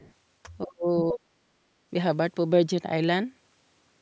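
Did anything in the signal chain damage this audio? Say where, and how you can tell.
Yes. The other side's voice leaking through appears at 0.0–0.13 s, faint at about 30 dB below the talker, and again at 0.98–1.02 s, much stronger at about 10 dB below. This likely points to call processing, where the echo canceller left loudspeaker sound in the microphone signal.

Speech suppressed in double talk hits at 0.63–0.88 s and 1.12–1.36 s. The talker's level falls sharply, by roughly 35 to 40 dB at its deepest. The likely cause is the echo canceller, which mistook overlapping speech for echo and turned down the talker along with it.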